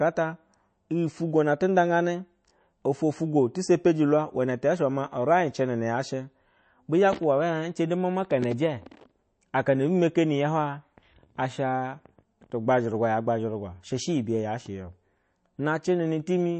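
Speech that carries plainly audible MP3 compression damage from start to finish. The treble stops dead at 8.3 kHz, and fine detail sounds watery and swirly, with metallic chirps on s sounds and smeared consonant attacks, which fits a low bitrate of around 34 kbps. The likely cause is an encoder starved of bits, cutting the top band and zeroing weak frequency lines. A spectrogram would show a hard ceiling at 8.3 kHz and speckled, flickering gaps below it.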